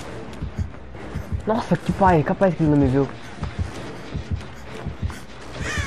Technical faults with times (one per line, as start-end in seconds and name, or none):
1.10-3.65 Bluetooth SBC bit pool drop